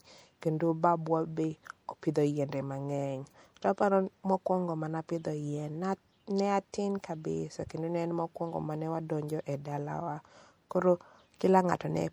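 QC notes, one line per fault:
Throughout, MP3 compression: the speech has a plainly audible watery, swirling texture, with metallic chirps on s sounds and smeared consonant onsets, likely from MP3 encoding at a rate that fits about 64 kbps. Short of bits, the encoder drops weak frequency lines that flicker on and off between frames. Unlike a simple low-pass filter or noise reduction, this leaves shifting, chirpy debris rather than a steady dullness.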